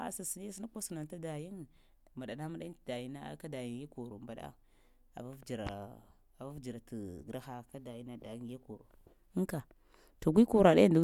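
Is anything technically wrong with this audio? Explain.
No, nothing is technically wrong.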